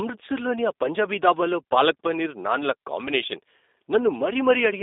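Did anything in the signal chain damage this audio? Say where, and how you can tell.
Yes. The speech went through a G.729 codec, the G.729A variant, at the codec stage, and the damage runs through the whole clip. The sound is confined to a telephone line band of roughly 300 Hz to 3.7 kHz, and the rough, slightly synthetic texture points to an 8 kbit/s encode. Because the codec rebuilds each 10 ms frame from a vocal tract filter, a pitch predictor and a few pulses rather than keeping the waveform, the speech stays intelligible but carries that plainly audible synthetic edge.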